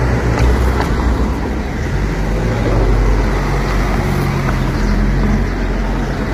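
From start to finish the sound carries heavy low-delay AAC compression damage, most likely from AAC-ELD at a low rate, with the coarseness suggesting something near 24 kbps. Its short frames resolve tonal detail poorly, so harmonic content turns rough and grainy, with noise filling the gaps between partials. On a spectrogram the harmonics look smeared and speckled, and nothing appears above 15.6 kHz, leaving a hard ceiling across the top of the image.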